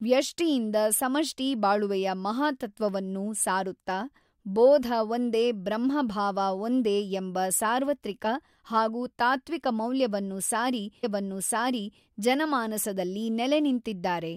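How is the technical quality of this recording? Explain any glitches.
There is one glitch, a stream segment repeated. From 11.03 to 12.03 s, just after "ಹಾಗೂ ತಾತ್ತ್ವಿಕ ಮೌಲ್ಯವನ್ನು ಸಾರಿ", the player queued one segment twice, so about 1.0 s of speech replays after a small blip where it jumps back.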